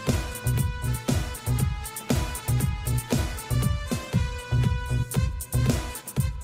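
Nothing in this one jumps out as a technical fault; the audio just runs along without any glitches worth pointing to.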